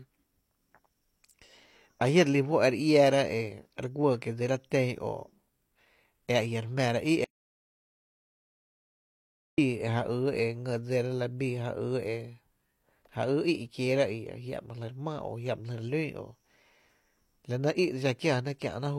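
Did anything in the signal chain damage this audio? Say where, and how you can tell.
Yes: an audio dropout to silence from 7.24 to 9.58 s, likely a lost input link, with plain silence, no room tone, and the speech cut mid-flow.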